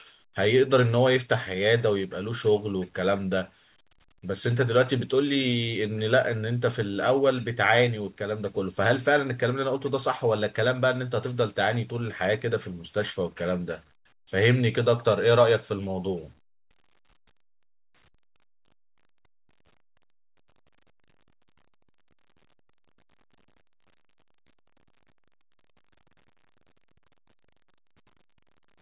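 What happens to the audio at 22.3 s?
Nothing goes wrong at 22.3 s; the speech there is intact, carrying only the narrowband telephone character of the call path, with nothing above 4 kHz, as the G.711 A-law codec would give.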